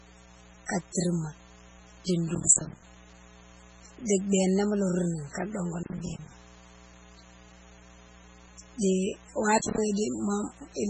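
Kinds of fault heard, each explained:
Mains buzz: Interference from the 60 Hz power supply has leaked into the recording chain. Sharp switching spikes arrive twice per mains cycle, so the hum carries a dense ladder of 60 Hz harmonics reaching well up the spectrum. Throughout the clip this is a steady, raspy buzz under the speech, sitting roughly 25 dB below the talker's level. It is audible in pauses and colours the voiced sounds too.
MP3 compression: The audio has been squeezed through a lossy encoder, likely MP3 at a very low bitrate, around 16 kbps. With so few bits, the encoder discards weak spectral detail that then flickers in and out between frames, and it cuts the treble above a fixed frequency. Here the damage is heavy. The speech has a watery, swirling texture, sibilants turn metallic and smeared, and nothing is left above about 10.3 kHz.
Processor overload crackle: The audio processor repeatedly failed to fill its small buffers, roughly 10 ms each, in time. 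Each miss dropped a short gap of silence into the stream with abrupt edges. Runs of these misses form bursts of gritty crackle riding on the speech at 2.35–2.82 s, at 5.83–6.31 s just after "ka dongo", and at 9.58–9.78 s. The last burst is the shortest, and the first has the most missed buffers.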